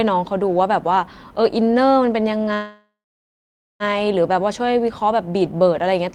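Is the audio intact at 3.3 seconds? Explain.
No, a call audio freeze runs from 2.53 to 3.83 s: the last sound fades out, then near-silence covers 3.3 s, likely from delayed packets emptying the jitter buffer; playback then resumes about 1.27 s late.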